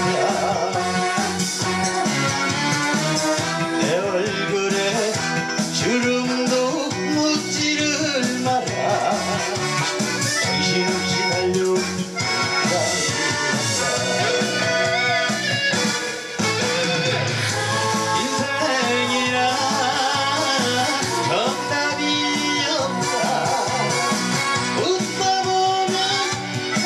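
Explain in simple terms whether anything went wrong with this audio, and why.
Nothing went wrong with this audio, because no fault can be heard anywhere in it.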